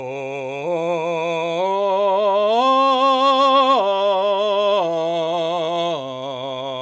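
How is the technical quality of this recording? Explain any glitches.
No glitches: the music passes through call microphone processing, which trims the lowest bass and leaves nothing above 8 kHz, both normal for that path.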